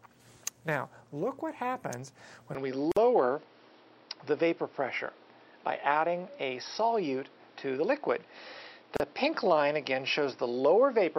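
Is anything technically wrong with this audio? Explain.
Yes, there are three kinds of fault. At 1.93 s there is an electrical switching spike: a sharp snap laid over the sound, likely from a nearby switch or discharge arcing into the audio line.

From 2.55 s to the end, the input switched to a poorer device, likely a different microphone or headset profile. The sound turns duller with nothing above 5.6 kHz. The level shifts by roughly 5 dB, and new background noise sits roughly 30 dB down, with no silence at the change.

There are gaps at joins of encoded pieces at 2.92 s (about 50 ms) and 8.97 s (about 34 ms), six seconds apart. Untrimmed encoder delay and end padding leave silences whose edges the codec smears before the sound resumes.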